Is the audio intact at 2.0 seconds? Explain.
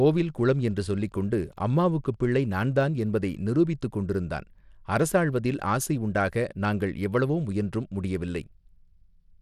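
No. At 2.0 seconds the speech is inside the Wi-Fi interference that runs from the start to about 2.94 s. A nearby Wi-Fi radio's transmissions are rectified by the audio circuit, giving a faint, steady tick every 102.4 ms, about ten per second, well below the speech. Its fixed rate and lack of dependence on the speech set it apart from digital clicks or codec noise.

The same moment also carries gritty, granular noise and a flickering, unstable top end on the speech, present through the whole clip, even though content reaches up to 20.8 kHz. This is likely Bluetooth SBC compression at a rate consistent with about 96 kbps, where coarse quantisation of the sub-bands leaves plainly audible grit. Unlike the interference, it follows the speech rather than ticking on its own.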